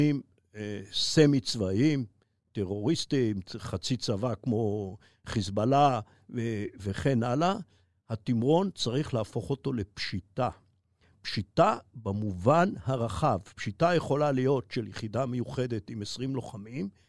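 Nothing in this speech recording stood out as a technical fault on listening.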